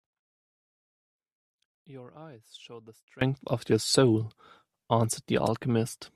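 From 0 to 3.21 s the speech collapses by about 25 dB in mono, turning faint, likely one channel inverted so the shared centre cancels.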